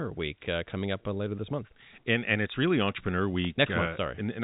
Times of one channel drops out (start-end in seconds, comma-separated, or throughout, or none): none